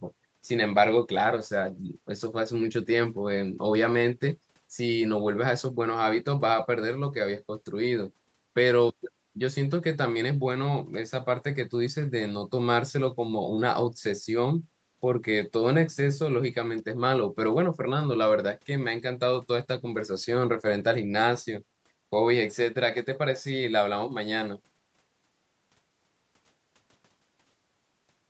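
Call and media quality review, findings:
Nothing stood out on listening to this speech over the call path, with no findings to log.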